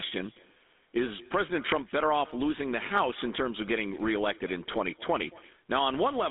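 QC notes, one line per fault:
Throughout, echo with no canceller: each stretch of speech is trailed by a faint second copy arriving roughly a fifth of a second later, about 25 dB below the direct sound. The far end is evidently playing the call through a loudspeaker, and its microphone picks that playback up and returns it over the network with nothing to subtract it. The copy sounds thin because it has crossed air, a loudspeaker and a microphone.
Throughout, GSM full-rate codec: the speech has a plainly audible buzzy, gravelly roughness, consistent with the 13 kbps full-rate codec. It rebuilds the voice from a vocal-tract model excited by a sparse, regularly spaced pulse train that keeps only a fraction of the true excitation, so fine detail turns to grit. The line band runs only from about 250 Hz to 3.7 kHz, which removes the low body and the upper sibilance.
4.72 to 4.76 s, lost GSM frames: there is a brief rough, metallic smear lasting about 20 ms, which points to a single lost frame. 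The decoder had no valid data for that slot, so it reused the parameters of the last good frame. This held, repeated excitation rings unnaturally before the next good frame restores normal decoding. The loss is too short for the level to fade towards silence.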